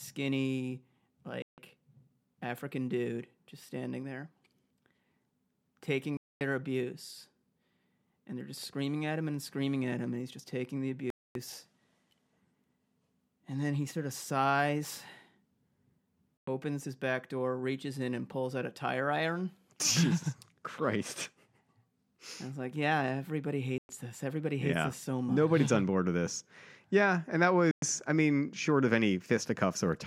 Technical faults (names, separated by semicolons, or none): Bluetooth stall